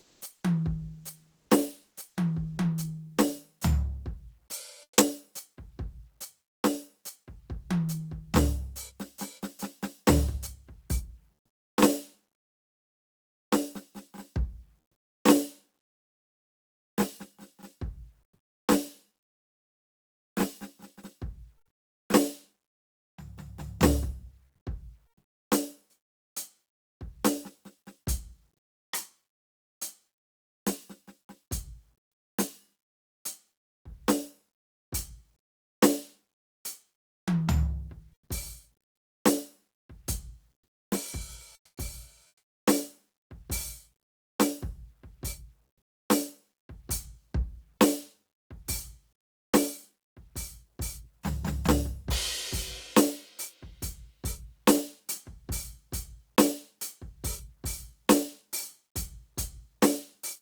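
Between 0 and 4.97 s, at 18.23 to 18.67 s and from 24.45 to 42.65 s, quiet passages of the music turn into smooth, featureless hiss, likely comfort noise in place of the background from discontinuous transmission. About 0.35 s, 0.44 s and 1.98 s are replaced. In the second pause the background sits about 56 dB below the loud parts and the level shifts by about 9 dB.

At 41.55 to 41.77 s, sound dropped by the voice detector likely occurs. About 110 ms of actual music vanishes into 220 ms of noise. This differs from the comfort-noise pauses, where only background is lost.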